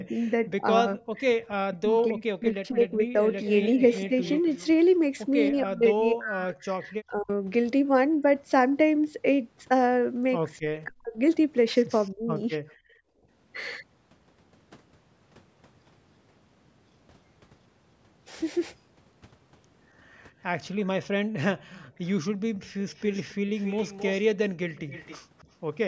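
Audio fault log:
0.0–3.17 s, 5.51–7.3 s, 10.6–11.17 s, 12.13–12.6 s: speech suppressed in double talk. The near voice dips in pieces, by about 30 dB in the first stretch, about 40 dB in the second and third, and about 15 dB in the last. Each stretch has roughly one and a half seconds, half a second or a fifth of a second of affected sound. This is likely an echo canceller confusing local speech with loudspeaker echo while both ends talked, and attenuating everything.
3.32–4.67 s, 12.69–12.74 s, 21.66–25.41 s: echo leak. A copy of the voice returns 271 ms late, at about 20 dB below the speech in the first stretch, about 40 dB below in the brief scrap at 12.69 s, and about 15 dB below across the long final stretch. The fixed 271 ms lag points to a likely incomplete echo cancellation at a speakerphone end, with the residue sent back down the line.
12.76–13.29 s: background gated by the echo canceller. 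Right after the echo scrap, the room sound drops by about 20 dB for roughly half a second and then returns. The canceller clamped the microphone hard while the loudspeaker was active and released it once playback stopped, so the ambience briefly falls away instead of staying level.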